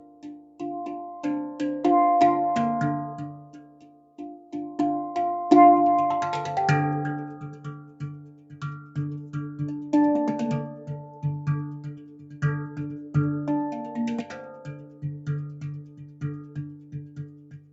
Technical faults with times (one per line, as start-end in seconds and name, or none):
0.00-17.73 noise suppressor applied to music or sounds
0.00-0.60 sound cut by the noise suppressor
3.34-4.53 sound cut by the noise suppressor
7.82-8.96 sound cut by the noise suppressor
10.74-11.17 sound cut by the noise suppressor
11.85-13.15 sound cut by the noise suppressor
14.70-15.27 sound cut by the noise suppressor
15.81-17.73 sound cut by the noise suppressor